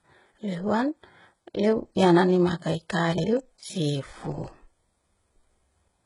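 Throughout the speech the treble sounds heavily gritty and metallic, with nothing above 11.1 kHz, likely HE-AAC compression rebuilding the top band from copied lower bands, consistent with roughly 12 kbps. At 3.12 to 3.24 s and again at 4.32 to 4.44 s the audio briefly jumbles: chunks out of order, where a 60 ms chunk plays one chunk late, leaving hard joins.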